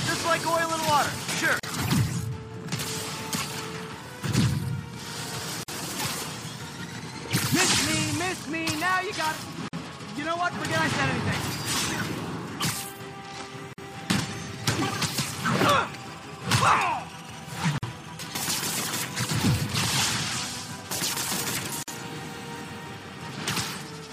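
The audio has a gap at a join of encoded pieces every 4 s, at 1.6, 5.63, 9.68, 13.73, 17.78 and 21.83 s: 38 ms first, then 49 ms. Separately encoded chunks kept their untrimmed encoder delay and padding.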